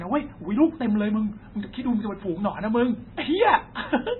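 Throughout the speech, MP3 compression damage is heavy: nothing survives above 4 kHz, so the treble is cut flat and s sounds turn watery and chirpy. That fits a very low bitrate of about 16 kbps, the likely cause. On a spectrogram the energy stops at a hard ceiling, with flickering holes below it.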